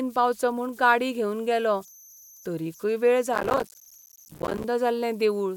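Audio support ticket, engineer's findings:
Converter idle tones, whole clip: faint whistle near 7 kHz, about 29 dB below the speech. Undithered delta-sigma ADC cycling in repeating bit patterns on low-level input.

Processor overload crackle, 3.33 to 4.64 s, right after "तरीकय वेळ": gritty tearing from many missed buffer deadlines, each leaving a short silent gap, a spacing that fits buffers of roughly 5 ms.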